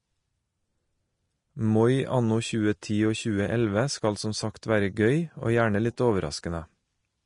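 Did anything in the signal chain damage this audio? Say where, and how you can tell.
Yes, at the codec stage. Throughout the clip the treble is hissy and grainy, with nothing above 10.6 kHz and roughened, blurred consonant attacks. This points to likely Vorbis compression at a low bitrate, around 34 kbps, which quantises the upper residue so coarsely that it turns to noise.

Pre-echo appears at 2.81 s, where a sharp attack is preceded by about 11 ms of hiss and sounds smeared. The transform block spreads its quantisation noise evenly, so noise sized for the loud onset also fills the quiet moment just before it.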